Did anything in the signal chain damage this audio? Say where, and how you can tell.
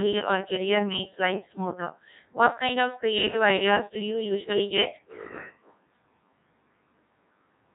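Yes. A Codec 2 vocoder at the codec stage colours the speech throughout, heavily. It sounds robotic and buzzy, which fits a rate near 1.6 kbit/s: only pitch, voicing, energy and a spectral envelope survive, and the decoder rebuilds the voice from sine waves, discarding the original waveform.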